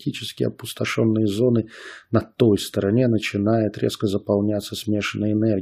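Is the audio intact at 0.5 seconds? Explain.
Yes, the speech at 0.5 seconds is intact, with no dropout, click, distortion or other fault to be heard at that moment.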